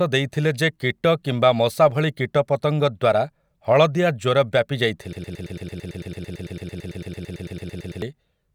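At 5.13 s the speech suddenly sticks and a fragment of about 0.11 s repeats exactly, back to back, about two dozen times in a rapid mechanical stutter until 8.02 s. This is a broken-record loop: the stream stalled and kept resending the last short piece held in memory, most likely from a player, encoder or stream that froze. Whatever was spoken during those nearly three seconds never comes through.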